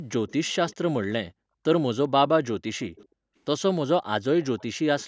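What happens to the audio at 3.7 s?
Nothing goes wrong at 3.7 s: the speech carries on intact through that moment, with only the ordinary band limit of call microphone processing, which trims the deepest bass and leaves nothing above 8 kHz.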